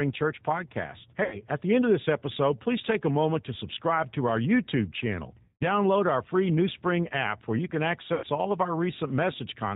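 The whole recording passed through the G.729 codec, and what can be heard fits an 8 kbit/s G.729A stream. Speech is rebuilt from a filter, a pitch predictor and sparse pulses, so nothing above 4 kHz survives, and the voice sounds plainly rough and synthetic.

VoIP packet loss concealed by the speech codec occurs three times. Audio is missing from 1.24 to 1.45 s, just before "at the end of"; from 5.43 to 5.65 s, ahead of "our free"; and from 8.14 to 8.27 s, between "app where you can" and "all of our". Each time the decoder stretches its last pitch and filter into a fading buzzy tone or coloured noise, and the sound stays weak for a moment after packets return.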